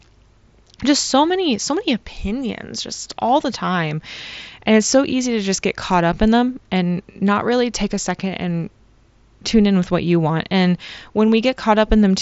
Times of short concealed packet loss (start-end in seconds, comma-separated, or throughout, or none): none